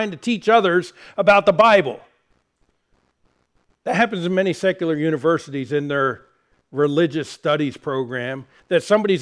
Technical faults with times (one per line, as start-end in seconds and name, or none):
none